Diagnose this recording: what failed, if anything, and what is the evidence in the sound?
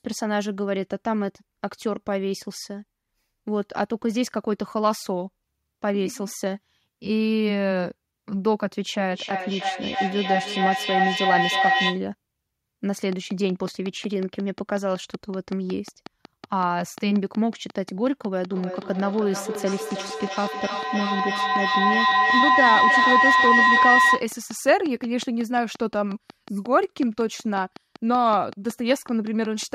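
Feedback howl appears twice, from 9.11 to 12.08 s and from 18.45 to 24.33 s. This is an acoustic loop in call processing, where a loudspeaker feeds back into a microphone on the same call. The first episode settles on a tone near 700 Hz and peaks about 3 dB above the speech. The second sits near 1 kHz and reaches about 6 dB above. Both pulse at roughly 300 ms, the round-trip delay of the loop, and grow until the loop breaks.

A train of clicks runs from 13.12 s to 29.64 s, at 5.45 clicks per second with regular spacing. That comes to around a hundred near-identical pulses peaking roughly 5 dB above the signal. They tick through the speech and across the gaps, overlapping the second howl. The steady rate and uniform shape point to a likely cause in the analogue wiring or interface, such as electrical interference or a faulty connection or power supply injecting a periodic pulse.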